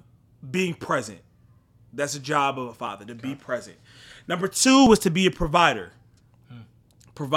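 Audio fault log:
2.87 s and 4.87 s, overlap between stream segments: two tiny skips about 2 s apart, the first between "a job of a" and "to okay be present", the second just before "was to be a". Adjacent 2-second segments claim overlapping time, so the player trims roughly 19 ms and 12 ms of sound that was never duplicated. The waveform jumps across each gap.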